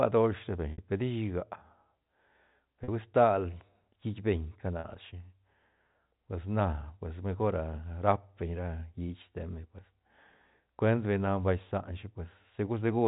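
At 0.72 to 0.78 s, 2.84 to 2.88 s just before "hui stal hiit", and 4.80 to 4.84 s there's packet loss with pitch repetition. The receiver loops the last pitch period across 60, 40 and 40 ms gaps, so the two 40 ms gaps sound like a brief, buzzy held note and the 60 ms one fades out into silence before the speech cross-fades back, over the narrowband G.711 telephone audio.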